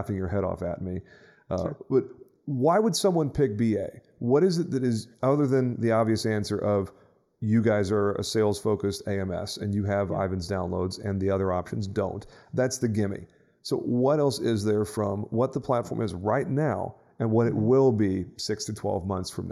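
Speech with channel delay (comb filtering) throughout: one channel lags by a fraction of a millisecond, so summing to mono cancels evenly spaced frequencies from around 3 kHz upward. The hollow, phasey tone stays fixed rather than sweeping like flanging.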